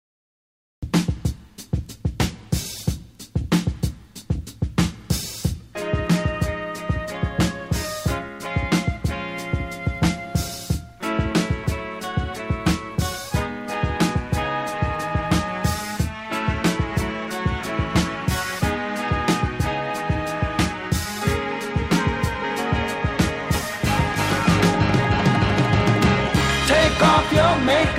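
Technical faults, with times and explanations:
0 to 0.83 s, cut-off start: capture began late, so silence gives way abruptly at 0.83 s to sound already in progress, with no natural attack or fade-in.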